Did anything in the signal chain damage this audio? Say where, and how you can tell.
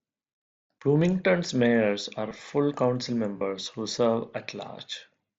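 Yes: concealed Bluetooth headset packet loss on the wireless link, with a brief patch at 2.29 s and a longer one from 3.38 to 3.41 s. Missing mSBC voice packets were filled by repeating the best-matching recent waveform, leaving a short held, buzzy tone. The lengths fit about two and four lost frames.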